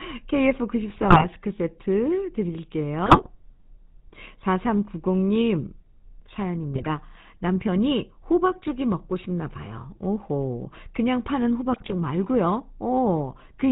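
The whole speech clip carries the GSM full-rate codec's buzzy, gravelly roughness and a ceiling around 4 kHz, which fits the 13 kbps full-rate coder's pulse-driven vocal-tract model. GSM bit errors hit at 0.9–1.25, 3.06–3.27, 6.72–6.87 and 11.73–11.95 s. Corrupted filter, pitch and gain values make the sound squawk, pop and gargle for 7 to 14 frames each time.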